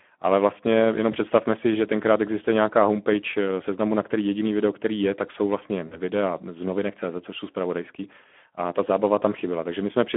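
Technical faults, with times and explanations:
Throughout: Speex codec. The speech is plainly hoarse and noisy, which fits a Speex bitrate of around 11 kbps. At that rate too few bits describe the excitation, so the CELP coder's estimate of the voice's fine structure comes out rough. The audio is also confined to a 200 Hz to 3.4 kHz telephone band. On a spectrogram, energy stops sharply at both edges, and harmonics look smeared and grainy rather than cleanly striped.
1.12–1.17 s and 5.87–5.98 s: VoIP packet loss concealed by the speech codec. The first gap, just before "si že tenkrát existuje", lost about 20 ms, which fits one frame. The second, between "je tak jsou vlastně" and "z novinek", lost about 40 ms, which fits two frames. In each, the decoder stretched its last pitch and filter into a brief sound with falling gain. Because each frame builds on the previous one, the speech stays weak for a moment after packets resume. 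On a spectrogram, each gap shows the last sound stretched and fading out. On the waveform, the envelope dips.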